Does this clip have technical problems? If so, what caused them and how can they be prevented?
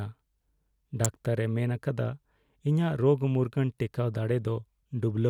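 Yes. A nearby switch, motor or static discharge most likely threw off a brief electrical arc that the audio line picked up at 1.05 s in this speech clip. That electrical switching spike lands on top of the speech as a sharp snap, with a peak somewhere around -10 dBFS, and gone almost instantly. To prevent it, keep audio cables away from switched mains gear and motors, and use balanced, well-grounded connections.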